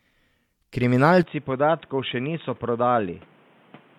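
At 1.23 s the input likely switched to a poorer device, whose narrower band passes nothing above 3.8 kHz. With no gap at the switch, the speech loses its top end through to the end, drops roughly 5 dB, and gains new background noise about 30 dB down.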